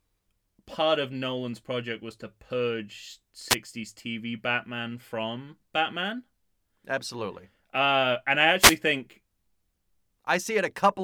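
Wireless microphone noise hits occur at 3.49 to 3.55 s, just after "project was to purge", and at 8.58 to 8.77 s, after "and I". Each time, reflected signals cancel the FM radio link, and receiver noise surges as a brief swish of static.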